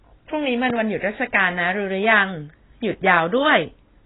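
From the start and through the whole clip, the speech carries heavy AAC compression damage: nothing survives above 3.9 kHz, so voices sound dull and boxy, with a watery warble on sustained sounds and smeared sibilants. The likely cause is AAC-LC coding at a very low rate, which fits a bitrate near 16 kbps. On a spectrogram there is a flat ceiling at 3.9 kHz with patchy holes and blotchy texture below it.

At 0.70 to 0.72 s a single loud pop sits on top of the speech, which continues underneath. It peaks at roughly 10 dB above the surrounding signal and sounds like a sharp click-thump. It is likely a brief voltage pulse from a plug, switch, static discharge or driver glitch. The waveform shows one tall, narrow spike, and the spectrogram shows a thin vertical stripe across all frequencies below the cut-off.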